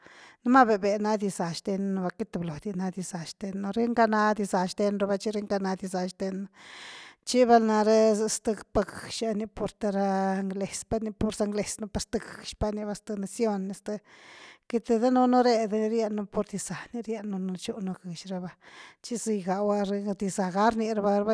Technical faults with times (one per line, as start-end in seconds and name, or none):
none